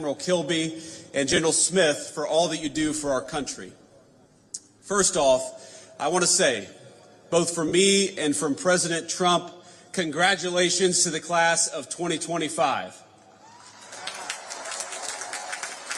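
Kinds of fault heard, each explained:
Lost LE Audio frames: Short gaps in the Bluetooth LE Audio stream were concealed by the LC3 decoder, which reused the previous spectrum with randomised phase signs. Each gap leaves a brief noisy smear in place of tonal detail. This happens near 1.30 s, 7.68 s and 14.56 s. Each event covers about 37.5 ms of missing audio, consistent with five 7.5 ms frames. The first and last are scattered over 75 ms and 60 ms, with runs of around 15 ms.
Filter restarted on every block: A filter stage clears its internal state at each processing block and begins from zero, so every block opens with a small start-up transient. From 2.61 s to 5.39 s these transients repeat at 100 Hz, producing a buzz that rises and falls with the signal level. The rate suggests blocks of 10 ms.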